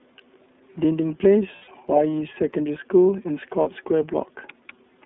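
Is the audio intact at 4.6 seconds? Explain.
No. At 4.6 seconds the speech sounds thin, boxed-in and slightly buzzy and synthetic, with nothing above about 3.6 kHz and little below 200 Hz. This is the iLBC codec, present for the whole clip. It encodes each 30 ms frame's excitation on its own, without drawing on the previous frame, so fine detail is coarsely rebuilt and the roughness is plainly audible. The narrow band fits a telephone-grade path at around 13.33 kbps.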